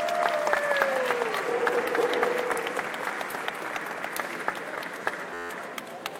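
At 5.34 s, a system hang loop takes over the sound until 5.50 s. The computer or its audio driver stalled, but the sound hardware kept replaying its ring buffer. One slice of about 11.6 ms repeats exactly, 14 times. That length fits a 512-sample buffer. The repeats come at about 86 Hz, so they fuse into a steady, flat buzz rather than a stutter. When playback resumes, little or no audio seems to be missing.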